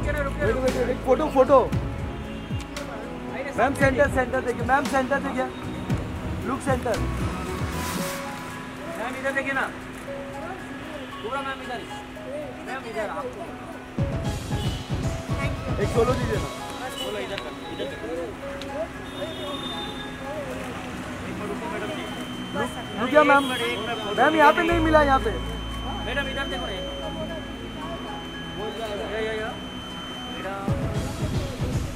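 A feedback whistle runs from 21.72 to 30.52 s, a thin 3.1 kHz tone under the sound, likely a speaker-to-microphone loop at the feedback point.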